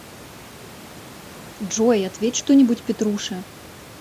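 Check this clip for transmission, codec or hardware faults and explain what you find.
No transmission, codec or hardware faults.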